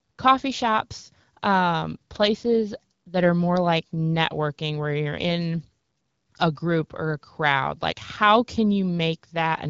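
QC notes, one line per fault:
No faults to note in this speech clip, so there are no QC lines per fault.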